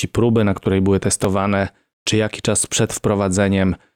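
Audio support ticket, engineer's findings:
Repeated buffer: brief clicks at 1.24 s after "próby na której były" (chunk played twice more) and 2.98 s after "czy jaki czas przed" (once more). Output underrun, about 1.33 ms chunks, fits a 64-sample buffer.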